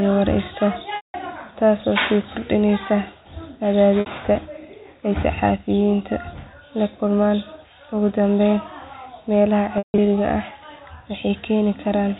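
Packet loss with pitch repetition occurs at 0.96 to 1.14 s (180 ms), 4.00 to 4.06 s (60 ms), and 9.78 to 9.98 s, where losses scatter across 200 ms with a longest run of 160 ms. The receiver repeats the last pitch period and fades it out. The short gap sounds like a briefly held buzz. The longer gaps decay into silence before the speech cross-fades back, over band-limited G.711 telephone audio.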